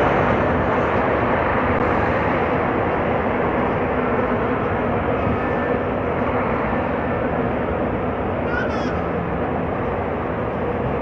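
At 1.79 s there is an underrun with held sample. The output buffer ran dry for about 12 ms, which fits a 512-sample buffer. The converter held its last value, so the waveform sits flat at a fixed level. The sound simply stops, with little click at the start. Roughly 10 ms of live audio was lost during the gap.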